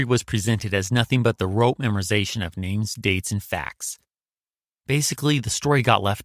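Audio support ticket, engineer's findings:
Listened through the speech recording in full and nothing stood out as a problem anywhere in it.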